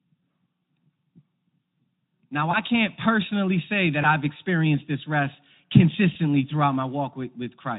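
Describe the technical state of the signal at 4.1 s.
Right after "can't personally say", from 4.01 to 4.12 s, the speech is briefly stretched into a buzzy tone or coloured noise, then fades and stays weak and smeared until "experienced this rest". This is VoIP packet loss concealed by the speech codec. A gap of about 20 ms, consistent with a single lost frame, was filled by extrapolating the previous pitch and spectral shape at falling gain. Because the Speex decoder builds each frame on its predecessor, recovery trails for roughly 80 ms.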